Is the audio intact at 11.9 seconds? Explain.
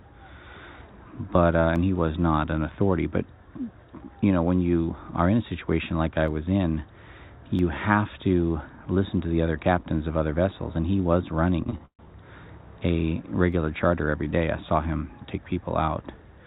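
No. Between 11.64 and 12.05 s there are repeated stalls (stutter): packets arrived late, the jitter buffer ran dry four times, and each gap was filled by stretching the last sound, the longest for 134 ms. Unlike a dropout, nothing is lost; the audio just drags and hiccups.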